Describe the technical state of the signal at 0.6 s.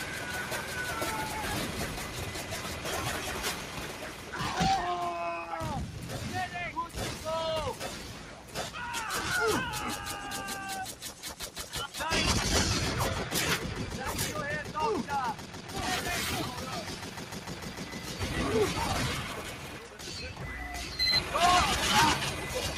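At 0.6 s the sound sits audibly sunk and thinned, dipping by about 4 dB within the span from 0.0 to 0.76 s. This is sound cut by the noise suppressor, which mistook the material for noise and pulled it down. Underneath, the level pumps and flutters by around 10 dB, because a noise suppressor was applied to music or sounds and keeps ducking steady parts while letting onsets pass.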